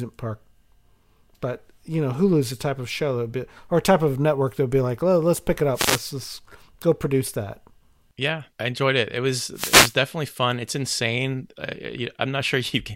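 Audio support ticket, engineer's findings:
Wireless microphone noise hits at 5.73–6.01 s and 9.54–9.96 s in the speech: short static swishes over the voice. Probable component is the analogue FM radio link, with reflections cancelling the signal and receiver noise rising during each fade.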